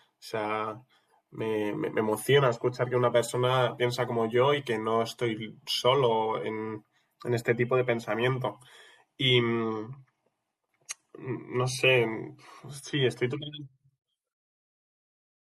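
At 8.52 s the speech switches abruptly, with no gap, to an adaptive stream at a lower bitrate, and stays there to the end. The connection evidently slowed, so the player fetched a leaner encoding, consistent with a step from about 96 to 48 kbit/s AAC. The top end dulls. On a spectrogram the content above 12.1 kHz is abruptly cut off from that point, while the waveform shows no break.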